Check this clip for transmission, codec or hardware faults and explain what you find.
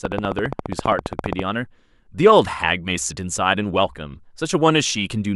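There's one fault here, a train of clicks from 0.05 to 1.40 s. Around twenty sharp, matching ticks arrive at a steady 14.9 per second, standing roughly 15 dB above the speech, likely interference from nearby equipment or a faulty connection or power supply injecting repeated pulses.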